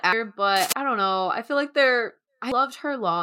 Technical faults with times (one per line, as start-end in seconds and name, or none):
0.56-0.73 cable scratch noise
2.52 damaged data in a compressed stream